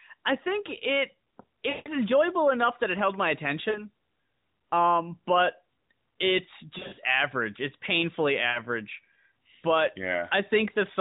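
At 1.70–1.89 s, 3.70–3.88 s, 6.78–7.01 s and 8.50–8.60 s, lost AMR speech frames appear. The decoder repeats its last good pitch and vocal-tract settings at falling gain, so speech smears into a drawn-out buzz. The first gap, about 160 ms, fades nearly to silence, and the third flutters as a scatter of short dropouts. On a spectrogram, harmonics flatten into frozen horizontal bands below the 4 kHz narrowband ceiling. On the waveform, the envelope tapers.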